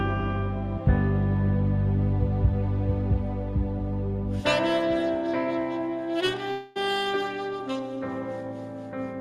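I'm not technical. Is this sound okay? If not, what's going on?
No. At 6.51 to 6.77 s, likely a long network dropout: audio stopped arriving, so the receiver stretched the last sound into a fading buzz for about a quarter second, losing that part.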